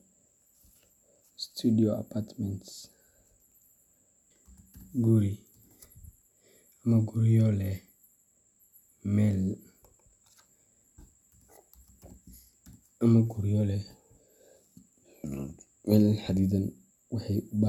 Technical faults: stream segment skipped

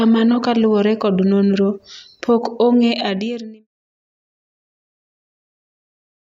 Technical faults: none

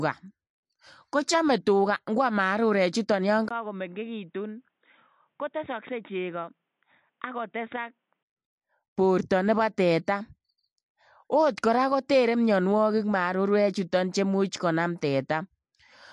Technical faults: MP3 compression; input switched to a poorer device

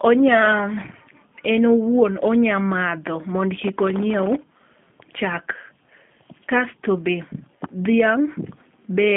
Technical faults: G.729 codec

